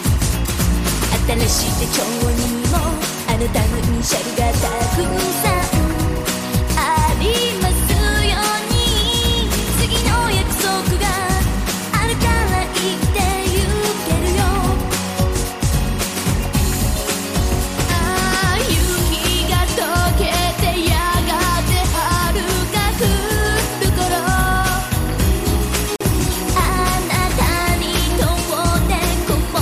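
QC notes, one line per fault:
throughout: timecode bleed. A steady chirping warble sits behind the sound, roughly 20 dB down. Linear timecode at 23.976 frames per second is leaking in from a nearby track or cable. Its square wave flips between pitches near 1 and 2 kHz.
25.96–26.01 s: gap at a join of encoded pieces. The sound breaks for about 46 ms, then resumes where it left off. Separately encoded pieces were butted together untrimmed. Start-up delay and end padding leave silence with smeared edges.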